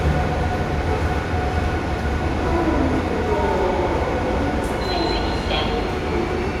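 No technical faults are audible anywhere in this recording of sounds.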